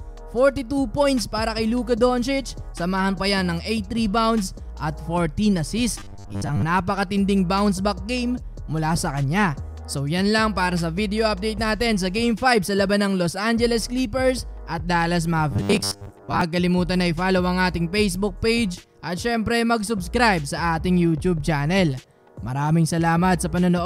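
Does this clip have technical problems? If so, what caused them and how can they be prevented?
Yes. Audio likely arrived too seldom, so the last 10 ms block was replayed in place of missing material. This is robotic sound from repeated short buffers, at 6.00 to 6.63 s (about half repeated) and 15.51 to 16.41 s (most repeated), a rigid 100 Hz buzz. A larger playback buffer or steadier delivery prevents it.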